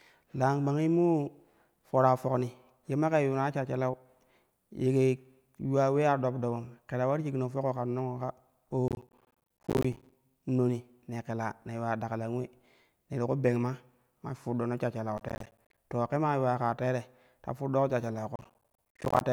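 Processor overload crackle breaks into the speech from 8.88 to 10.14 s, again from 15.18 to 15.78 s, and from 18.36 to 19.21 s. The processor misses dozens of buffer deadlines in a row, and each miss leaves a short hard-edged silent hole, spaced in a way that fits buffers of around 10 ms. The result is a gritty tearing over the speech. Unlike a single dropout, it is a dense run of tiny gaps that stops when the load eases.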